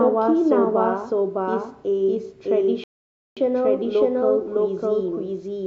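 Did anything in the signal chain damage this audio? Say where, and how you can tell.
Yes. A doubled audio track runs throughout: an equally loud copy trails by about 0.7 s, likely from a second, slower capture path. Unlike room echo, it has no decay or colouring.

A rebuffering stall at playback cuts the speech to silence from 2.84 to 3.37 s, adding 0.53 s. Unlike a dropout, it resumes exactly where it stopped, with nothing lost.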